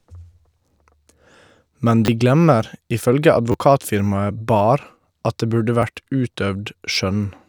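New audio reached the playback device late three times, so it replayed its last buffer, which fits a 10 ms buffer. This repeated buffer fault hits at 2.06 to 2.08 s, just before "de glemmer ifølge", and at 3.52 to 3.54 s, just after "de glemmer ifølge", each with two extra plays that cost roughly 20 ms of speech. At 5.82 s, after "det burde", one extra play occurs. With so short a buffer, each repeat sounds as a hard-edged click or brief buzz.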